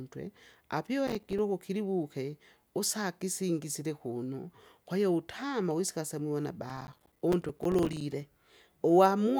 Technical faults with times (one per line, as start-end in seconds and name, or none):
1.07-1.39 processor overload crackle
6.70-8.01 processor overload crackle